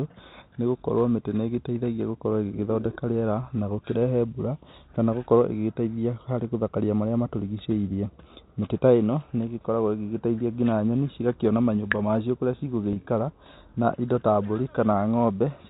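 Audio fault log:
12.93–12.96 s, packet loss with pitch repetition: just after "cigakĩona manyũmba macio kũrĩa", about 30 ms of audio goes missing, which points to a single lost packet. The receiver bridges the hole by repeating the last pitch period, so instead of a dropout the sound briefly holds on a slightly buzzy, frozen tone. The gap is shorter than the concealment fade, so no silence is heard. The G.711 telephone band ends at 4 kHz.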